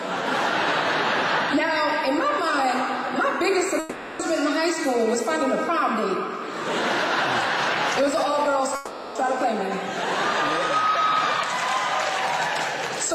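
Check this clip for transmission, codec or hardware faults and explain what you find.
Two breaks point to a long network dropout, at 3.79 to 4.22 s and 8.75 to 9.18 s. In each, about 400 ms of audio is replaced by a fading buzz carried on from the last sound, with no silence before the signal resumes. The likely cause is a stall in packet delivery: the receiver extended the last sound to bridge the gap, and the lost stretch never played.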